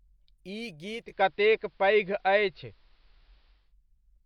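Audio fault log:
0.93 to 3.75 s, digital radio blending to analogue: the receiver drops to the AM feed over a 286 ms cross-fade, so the treble is cut, level shifts by about 3 dB, and faint hiss creeps in roughly 40 dB down, then it blends back.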